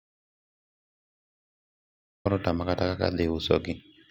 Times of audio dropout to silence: 0.00-2.25

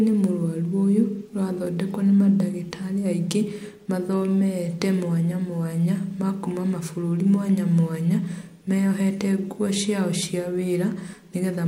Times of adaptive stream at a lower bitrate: none

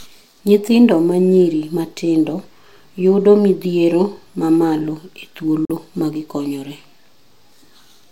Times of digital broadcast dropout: 5.65-5.75

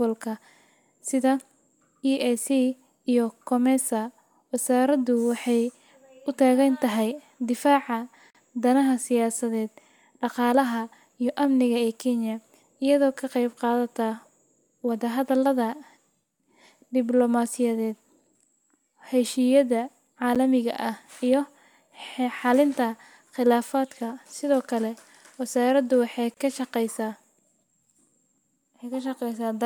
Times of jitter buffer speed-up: none

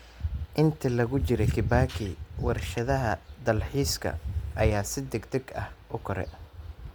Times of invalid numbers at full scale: none

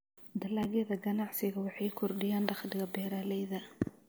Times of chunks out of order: 0.63-0.65

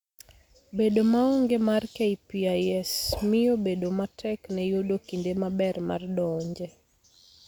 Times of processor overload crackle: none

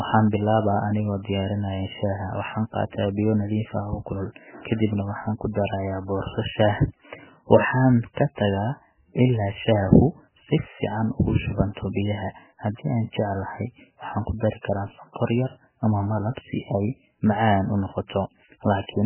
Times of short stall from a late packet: none

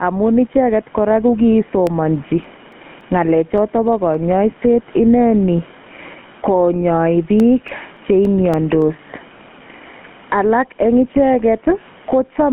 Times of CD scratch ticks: 1.87-4.14, 7.11-8.82

